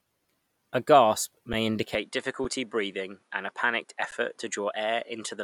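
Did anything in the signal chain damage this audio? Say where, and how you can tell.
Yes. Three tiny freezes interrupt the speech at 1.53, 2.44 and 4.11 s, each a flat hold lasting about 5, 5 and 11 ms, with no audible click on entry and a soft resumption. This is an underrun with held sample at the driver or buffer stage: the output buffer emptied, and the converter sat on its last value until data arrived. The gap lengths fit buffers of 256 and 512 samples, and nothing is lost because playback continues exactly where it paused.

From 1.95 s to the end, the speech loses its top: nothing reaches above 11 kHz. A new noise floor sits about 45 dB below the signal. There is no silence at the change and no jump in loudness, so it reads as a shift in tone rather than a dropout. This is likely an input switched to a poorer device, with the system moving mid-recording to a microphone whose narrower band and own self-noise now shape the sound.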